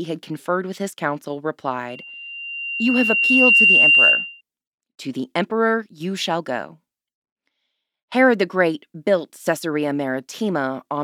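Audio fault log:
1.89–4.41 s, loudspeaker feedback squeal. A 2.8 kHz tone swells over about a second and a half to well above the speech. The microphone re-amplifies its own loudspeaker.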